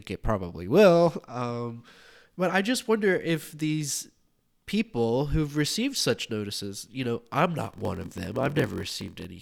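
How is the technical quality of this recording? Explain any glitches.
There's one glitch, near the end of the speech. From 7.6 to 9.25 s you get a block size mismatch (padded): one stage hands over shorter blocks than the next reads, which fits a 1024-sample read, so zeros pad each block. That's a 43.1 Hz buzz, with the speech dragging to 0.938 speed at roughly normal pitch.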